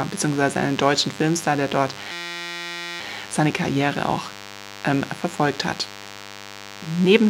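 Throughout the clip, a DECT cordless phone buzz sits under the speech, roughly 20 dB below it. A nearby handset or base station is transmitting a short radio burst every 10 ms, and the audio circuitry is demodulating those bursts into sound, giving a thin, steady buzz at 100 Hz. On a spectrogram it shows as a comb of evenly spaced horizontal lines at 100 Hz and its many multiples, unbroken from start to end. The waveform carries a regular 10 ms ripple even in pauses.

Right after "der dort", from 2.12 to 3.00 s, a system hang loop takes over. The driver or system stalled while the sound hardware kept replaying the same 5.8 ms stretch of its ring buffer, which fits a 256-sample buffer. That fragment repeats about 150 times at 172 Hz, so it is heard as a hard, pitched buzz rather than a stutter, and the speech stops dead. When playback resumes, no audio appears to be lost. On the waveform, the speech gives way to a perfectly periodic pattern that repeats identically. 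The spectrogram shows rigid harmonic lines spaced at 172 Hz, beginning and ending abruptly.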